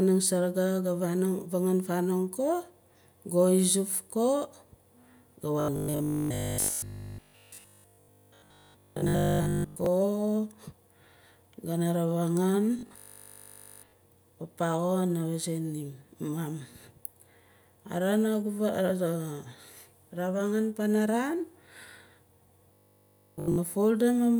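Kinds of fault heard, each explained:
Robotic sound from repeated short buffers: The speech turns into a stiff, metallic buzz at 50 Hz in three stretches: 5.60 to 9.86 s, 12.79 to 13.93 s and 22.74 to 23.58 s. New audio likely arrives too seldom, so playback keeps looping a 20 ms slice. That loop rate fixes the pitch of the buzz. In the first stretch most of the sound is repeated. In the two later stretches it is repeated throughout.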